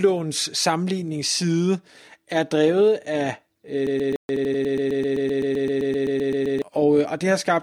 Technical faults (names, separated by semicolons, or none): broken-record loop; playback stall; time-compressed catch-up